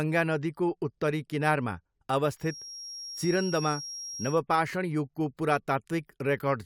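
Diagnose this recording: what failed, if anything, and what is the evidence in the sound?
Feedback whistle from 2.35 to 4.42 s: a steady 5.6 kHz tone well under the speech, likely a speaker-to-mic loop idling at the ringing point.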